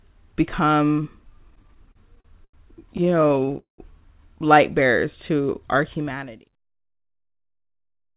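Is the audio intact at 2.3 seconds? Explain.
No. At 2.3 s the speech drags and stutters, part of repeated stalls (stutter) running from 1.44 to 2.55 s: twelve brief hitches, the longest 90 ms, with the last sound stretched to fill them. Packets arrived late, so the jitter buffer kept running dry. Nothing is lost.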